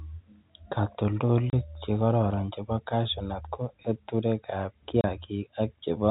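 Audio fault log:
1.50–1.53 s and 5.01–5.04 s, packet loss filled with silence. The speech drops out completely for 30 ms each time. The first gap comes just before "chekororon chebo cashew nut". The second comes just after "cashew nut ko eturekab". Each hole fits one lost 30 ms packet. The receiver had nothing to play and inserted digital silence. The audio stops and restarts abruptly against the telephone-band G.711 sound around them.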